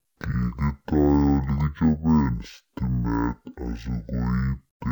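From start to finish the speech drags at half speed and sits a full octave low, 12 semitones down, giving a slow, deep, sluggish sound. This is stereo read as mono: interleaved left and right samples were played back in sequence as one channel.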